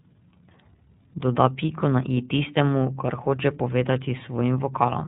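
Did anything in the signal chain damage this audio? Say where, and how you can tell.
Yes. iLBC codec damage runs throughout this speech, from the codec stage. Nothing above 4 kHz survives, and the speech sounds rough and synthetic. Each 30 ms frame's excitation is coded independently, which fits iLBC's 13.33 kbps mode.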